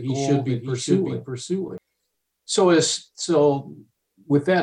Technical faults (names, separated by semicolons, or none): doubled audio track